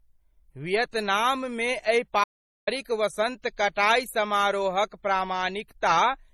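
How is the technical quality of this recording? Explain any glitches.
The speech recording has two technical faults: stacked lossy-codec artefacts throughout and one hard dropout.

Transcoding between lossy codecs, throughout: the audio was likely encoded twice, which points to low-rate MP3 followed by HE-AAC. That leaves the artefacts of both codecs heard together, with nothing above about 20.3 kHz.

Audio dropout to silence, 2.24 to 2.67 s: the input was likely lost for about 430 ms, so the signal falls to silence without room tone, resuming at "वसन्त कटाइ".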